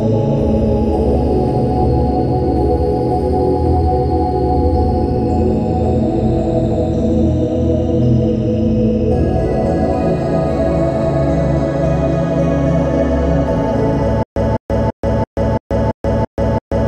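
At 14.23 s the audio falls into a stutter with silent gaps that continues to the end. A fragment of about 204 ms plays, then roughly 132 ms of digital silence follows, and the cycle repeats every 336 ms, eight times in all. This is likely a stalled player or stream that replays its last buffered fragment at each retry and then runs dry. The sound that should have filled this stretch is missing.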